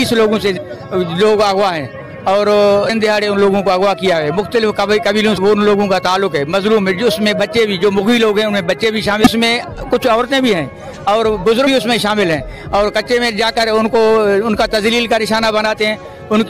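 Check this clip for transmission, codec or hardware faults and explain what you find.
Five short bursts of damaged data in a compressed stream are audible, at 0.56 s, 2.88 s, 5.37 s, 9.24 to 9.27 s and 11.66 s. Corrupted bytes make the decoder misread frames and lose sync, producing brief chirps or blips. On a spectrogram each shows as a thin broadband vertical smear; the waveform shows a sudden discontinuity.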